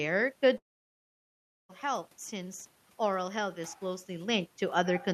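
From 0.57 s to 1.71 s the speech cuts out, likely a long network dropout. About 1.12 s of audio never arrives. The last sound trails off briefly as a fading buzz, then about 1.08 s of silence follows before speech resumes at "health since oral health", with the lost section gone.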